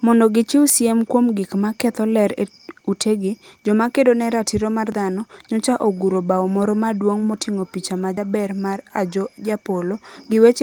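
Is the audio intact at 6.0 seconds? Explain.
Yes, at 6.0 seconds the speech plays through intact, with no dropout, click, distortion or other fault to be heard at that point.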